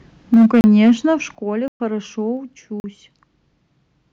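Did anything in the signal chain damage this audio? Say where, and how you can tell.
Yes. Microphone overload at the converter: from 0.33 to 0.92 s the loudest peaks sound flattened and crackly. The input likely ran about 4 dB too hot, clipping roughly 15% of samples.

Microphone volume stepped down by call processing: the whole level drops abruptly, about 3 dB at 0.34 s and about 9 dB at 1.35 s. This is likely an automatic input-gain correction.

Block of digital silence at the driver or buffer stage: hard cuts to silence at 0.61 s (31 ms), 1.68 to 1.80 s (120 ms), and 2.80 to 2.84 s (40 ms). Unfilled output buffers fit this.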